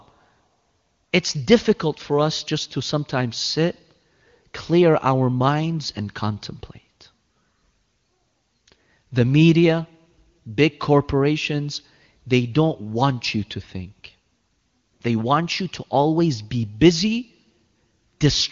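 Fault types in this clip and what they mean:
Nothing here counts as a fault; the speech comes across at a comfortably high-quality HD Voice setting, with little if any audible coding damage.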